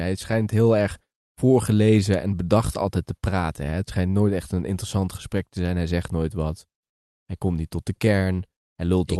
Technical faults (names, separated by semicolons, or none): clock drift between sender and receiver; repeated timing corrections